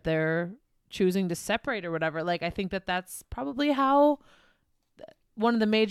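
No technical faults detected.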